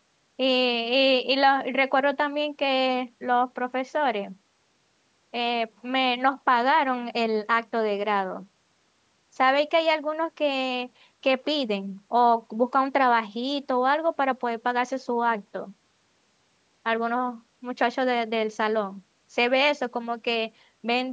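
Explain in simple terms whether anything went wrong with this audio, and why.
Nothing went wrong here.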